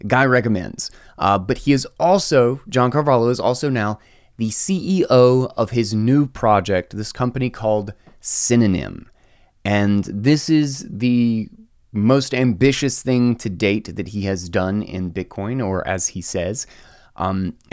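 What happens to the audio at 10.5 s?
Nothing goes wrong at 10.5 s; the speech runs through that moment intact, with no dropout, click, distortion or other fault to be heard.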